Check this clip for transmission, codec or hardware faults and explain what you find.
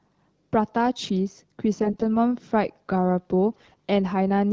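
Two brief bursts of AMR bit errors roughen the speech. It is carried over AMR wideband (HD Voice) audio whose light coding damage fits a 12.65 kbit/s mode.

AMR bit errors occur at 1.82–2.03 s and 3.52–3.75 s. The spans fit about 10 and 12 codec frames. Weakly protected bits arrived flipped, at roughly one in ten, then nearer one in seven. Meanwhile the checksum on the critical bits still passed, so misplaced excitation pulses and wrong pitch, gain and spectral values made the speech hoarse, scratchy and gargly while it roughly kept its pitch and level.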